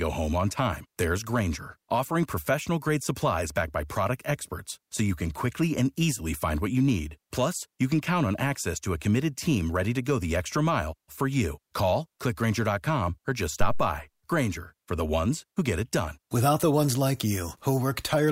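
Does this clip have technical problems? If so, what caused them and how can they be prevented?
Yes. A phantom power thump occurs at 13.61 s and lasts until 13.90 s. It is a deep thump that rises to about -13 dBFS and dies away with a decay time of about 66 ms. The cause is phantom power or another supply being switched while the input was live. That sudden voltage step passed through the coupling capacitors into the signal. To prevent it, mute or turn down the channel before switching the supply.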